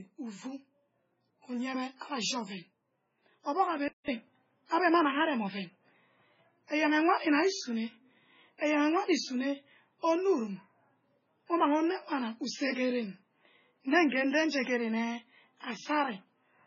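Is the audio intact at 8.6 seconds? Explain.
No. At 8.6 seconds the speech carries three faults at once.

A pre-echo runs from 8.58 to 8.61 s, spreading 36 ms ahead of a sharp attack. A transform codec shares its quantisation noise across a whole block, so when an onset lands late in that block, noise meant to sit under the loud part also fills the quiet stretch before it. The result is a brief hiss leading into the attack, which itself sounds softened and smeared.

The whole clip, including this moment, shows heavy MP3 compression. The damage points to a very low bitrate, around 16 kbps. Nothing passes above 7.6 kHz, consistent with the encoder's fixed treble cut. Short of bits, the encoder drops weak frequency lines that then flicker in and out between frames. That gives the speech a watery, swirly texture with metallic chirps on sibilants. This is the likely cause of the artefacts.

This moment also falls inside a stretch that began at 3.88 s, where the sound changes character after a 200 ms silence. 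The likely cause is the input switching to a poorer device. From that point the band stops at 6.7 kHz, duller than the codec limit alone would explain. The level shifts by about 5 dB, and a new noise floor sits roughly 50 dB below the signal, reflecting the replacement device's narrower response and its own background noise.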